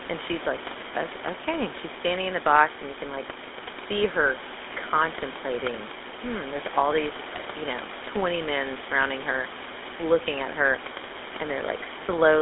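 From start to finish the speech carries the GSM full-rate codec's signature: a buzzy, gravelly roughness that's plainly audible. The codec rebuilds the voice from a vocal-tract model driven by a thinned-out train of pulses, so the grit comes from that sparse excitation, and the sound is consistent with its 13 kbps rate. The line band runs only from 250 Hz to 3.6 kHz, so it sounds thin and boxy. Room noise sits about 14 dB under the speech.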